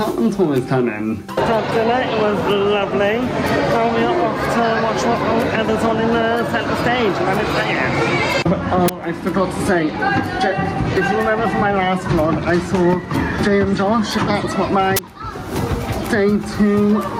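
Gain pumping runs through the whole recording, with the level swinging by something like 10 dB. That breathing makes the loud and soft parts sit much closer together, so the whole thing comes across squashed. The likely cause is input gain set way too high for the mic, with a fast limiter or compressor clamping down on every peak. There are also two uninitialised buffer bursts, short, loud spikes of digital noise where the playback grabbed a block before any real audio had been written into it, so whatever junk was sitting in memory got played as samples. The first hits at 8.88 s and lasts about 12 ms, which fits a 512-sample block. The second runs from 14.97 to 14.99 s, about 23 ms, which fits a 1024-sample block.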